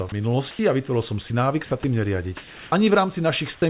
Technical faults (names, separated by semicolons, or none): sound dropped by the voice detector; comfort noise in place of the background; onset clipped by the voice detector